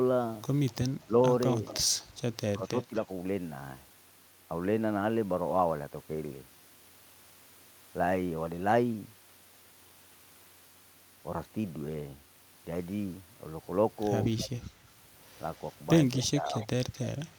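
Speech with a faint delayed copy trailing behind it at 0.68–1.03 s, 1.65–2.05 s, 2.65–3.01 s, 14.33–14.49 s and from 16.18 s to the end, lagging by about 243–249 ms and sitting roughly 15 to 30 dB under the voice. This echo leak likely comes from a far-end loudspeaker whose echo canceller let some of its microphone pickup return. Brief dips of the voice at 1.06–1.14 s, 2.54–3.09 s and 16.23–16.68 s, deepening to around 10, 15 and 20 dB, are speech suppressed in double talk, likely the canceller turning down both its own talker and the loudspeaker echo while both sides spoke at once.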